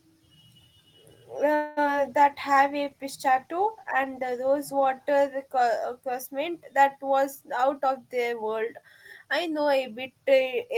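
At 1.55 s the speech stops moving forward: the last sound hangs on as a fading buzz or hiss for about 214 ms, until 1.79 s, and then the speech picks up exactly where it left off with nothing lost. This is a call audio freeze, likely caused by packets being held up in transit until the jitter buffer ran dry. The receiver stretched the final sound across the wait, so roughly a fifth of a second of extra time was inserted.

Straight after, two brief smears follow, at 1.85 to 1.87 s and at 1.97 to 1.99 s. Each is a short concealed packet loss: about 20 ms of audio failed to reach the decoder in time. The receiver patched the first hole by extending the preceding sound before blending back into the real signal, while the second was simply closed up. Each also trims a little of the delay the freeze built up, around 15 to 20 ms apiece.

From 2.09 s to 5.55 s the speech turns rougher, more watery and duller. 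This is a call bitrate drop. The connection's bandwidth estimate fell and the encoder went from 32 kbps down to 17 kbps, staying at the lowest rate for about 2.86 s. With so few bits the coding becomes coarse and the upper frequencies are cut back until the rate recovers.

Inside that stretch, from 2.50 to 2.85 s, the speech drags slightly at unchanged pitch, running at 90% speed with drawn-out sounds. This is a jitter buffer slow-down: to rebuild its reserve, the receiver repeated single pitch periods or bits of pauses many times over and added 39 ms in total.

From 7.63 to 8.83 s the speech sounds hurried at the same pitch, running at 113% speed, and it does so again more mildly from 9.25 to 10.07 s at 107%. Both are jitter buffer speed-ups. The buffer was holding more audio than it aimed for, so the receiver clipped out short pieces of one or a few pitch periods again and again, removing about 150 ms in the first stretch and about 70 ms in the second.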